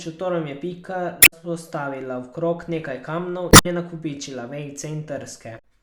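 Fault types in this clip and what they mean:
damaged data in a compressed stream: corrupt compressed frames throw the decoder out of sync until it finds the next frame header, causing three brief glitches at 1.19 s, after "v krog nekaj kamnov" at 3.49 s, and at 5.55 s.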